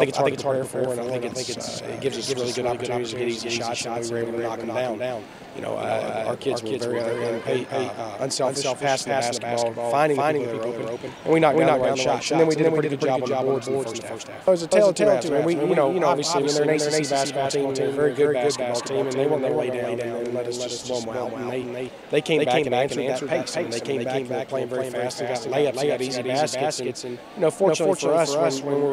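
A slower second capture path likely doubles the signal throughout, a doubled audio track: an equally loud, dry copy trails roughly 300 ms behind.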